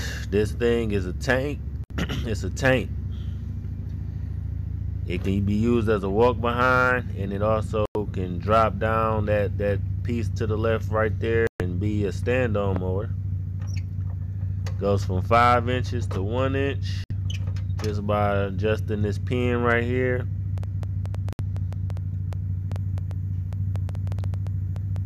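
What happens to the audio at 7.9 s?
At 7.86 s the sound cuts out and stays silent for about 0.1 s, returning at 7.96 s. This is a digital broadcast dropout: the receiver stopped getting usable frames and muted until valid ones resumed, so that stretch of programme is simply missing. The gap of roughly 96 ms fits about three lost frames. On a waveform it shows as a flat line; on a spectrogram, a clean vertical blank band across all frequencies.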